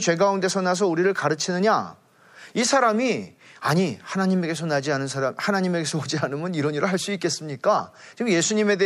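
A short, loud chirp of noise cuts through the speech from 7.78 to 7.80 s: a corrupt frame decoded, where damaged bits across a few compressed frames put energy at the wrong frequencies.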